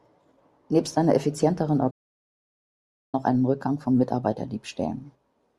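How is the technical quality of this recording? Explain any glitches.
The recording has one clear glitch, a playback stall. At 1.9 s, right after "einer effizienteren", the speech cuts to silence for about 1.23 s and resumes at 3.15 s with "auch einen". The player likely ran out of buffered data or was blocked. The waveform shows a flat line across that span, and the spectrogram shows a blank vertical band.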